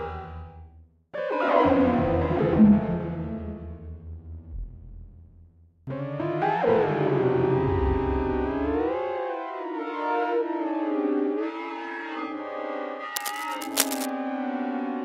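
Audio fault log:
13.16–14.10 s, cable scratch noise: for nearly a second, a dense, uneven scratching rustle sits over the sound, only a little quieter than it. The likely cause is a worn cable, connector or control being moved, its contact resistance fluctuating rapidly. On a spectrogram this shows as irregular broadband vertical streaks and smears. The waveform shows a ragged, spiky burst riding on the signal.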